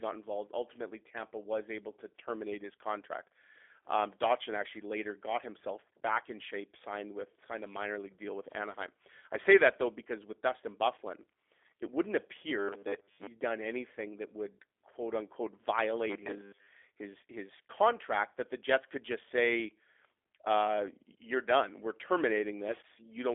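Right from the start and all the way through, the speech carries the sound of the G.729 codec, which fits an 8 kbit/s VoIP link. It's a narrow 300 Hz to 3.5 kHz telephone band with nothing above 3.6 kHz, and the frame-by-frame model rebuild leaves it plainly rough and synthetic.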